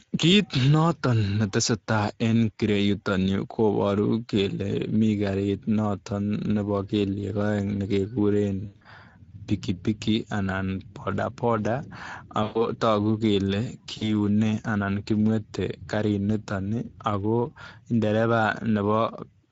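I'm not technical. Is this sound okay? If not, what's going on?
No. Throughout the clip the speech sounds rough, noisy and hoarse, with a thin, hissy quality in the high sounds. That is the Speex codec, an older compression system from internet calls and game chat. It squeezes the voice into very little data by keeping a rough model of it rather than the real sound, and here that squeezing is strong enough to hear clearly.

There are also three short breaks where the voice turns into a smeared sound that fades: from 8.65 to 8.86 s, 12.43 to 12.67 s, and 13.97 to 14.12 s. This is VoIP packet loss concealed by the speech codec. Pieces of the call went missing on the way, and the decoder filled the gaps by stretching the last sound it had, growing quieter as it went. The voice stays weak for a moment after each gap before recovering.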